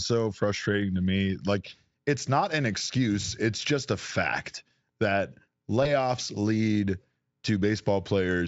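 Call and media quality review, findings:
VoIP packet loss concealed by the speech codec at 5.83–5.90 s, right after "just a fact that": short smeared patch fading out, then a soft recovery. Points to roughly one 20 ms frame lost; Speex decoder extrapolated from its last pitch and filter, lowering the gain frame by frame.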